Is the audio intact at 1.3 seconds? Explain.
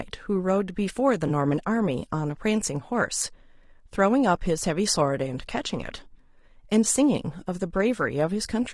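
No. Between 1.27 and 1.30 s there is an AAC frame loss with concealment. For a brief moment the speech is replaced by audio that is smeared and noisy rather than cut to silence. The length fits one lost frame of about 20 ms. The decoder rebuilt the gap from the last good spectrum, reusing its energy with scrambled phase. That is why it sounds like a grainy, phasey patch and not a clean dropout, a click, or a fade to silence, which is what a longer loss would produce.

Under and around that moment is low-delay AAC compression, plainly audible across the whole clip. The speech sounds rough and grainy, with noise filling the space between the harmonics and a thin, somewhat synthetic top band. The likely cause is AAC-ELD at a low bitrate, around 32 kbps. Its short frames cannot separate pitch harmonics finely. This damage is steady throughout, unlike the single brief patch of the frame loss.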